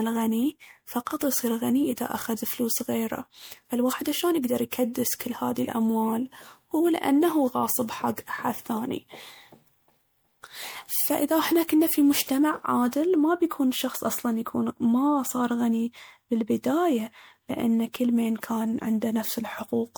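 From start to finish the speech has a swirly, smeared, hollow quality, with consonant attacks softened and blurred. That's generation loss, most likely from the audio going through MP3 encoding and decoding around five times. Each pass re-quantises on a shifted frame grid, so the noise and spectral holes pile up. It sounds rougher than its 128 kbit/s bitrate alone would explain, with nothing above 21 kHz.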